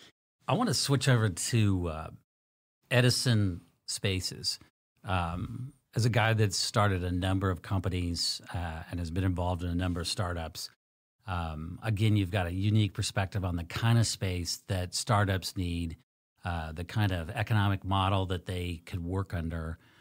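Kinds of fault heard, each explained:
No technical fault can be heard anywhere in the speech.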